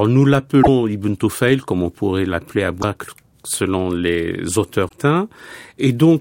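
Damaged data in a compressed stream hits this speech three times: 0.59 to 0.68 s, 2.78 to 2.84 s just after "comme on pourrait l'appeler", and 4.85 to 4.93 s after "selon les". Each time corrupted bytes reach the decoder, which misreads the frames there and loses sync until it finds a valid frame header again. The result is a short chirp, squawk, click or hole, lasting about 50 to 95 ms, cutting across the speech.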